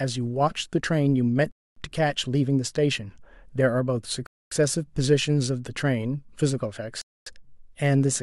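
Hard-edged 250 ms holes of silence interrupt the speech at 1.51, 4.26 and 7.01 s, recurring every 2.75 s. This is a gap between chunks: the audio was delivered in 2.5 s blocks with silence inserted at each join, so nothing is lost, only interrupted.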